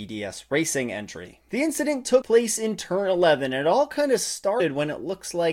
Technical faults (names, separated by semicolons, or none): compressed frames skipped